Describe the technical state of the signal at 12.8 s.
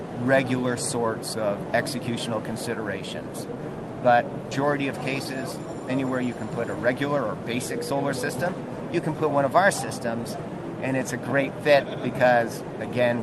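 At 12.8 s the signal is intact, with nothing beyond the ordinary character of the call codec path, whose top end stops around 12 kHz.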